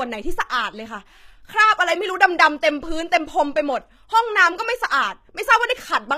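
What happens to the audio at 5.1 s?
At 5.1 s the speech is still passing through what is likely HE-AAC compression at a very low rate, consistent with roughly 20 kbps, which runs through the whole clip. Only the lower spectrum is actually coded; the treble is rebuilt by copying lower bands upward under a coarse envelope, with nothing above 14.9 kHz. Because those copied harmonics don't line up with the real ones, s sounds come out gritty, metallic and lispy.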